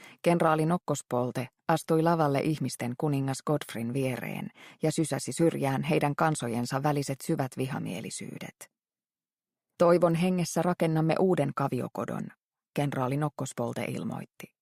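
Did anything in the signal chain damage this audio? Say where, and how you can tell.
No, nothing along the signal chain audibly damaged this audio, and every stage it passed through left the signal intact.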